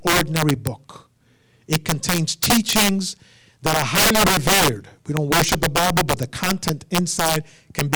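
Speech with integer overflow all the way through: driven roughly 12 dB too hot, a few percent of peaks wrap to the opposite sign, giving harsh cracks on loud syllables.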